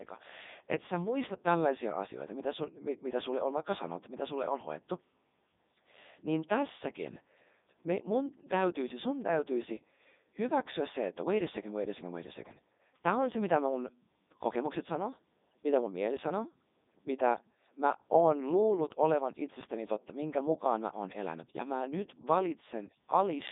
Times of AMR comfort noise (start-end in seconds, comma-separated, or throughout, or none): none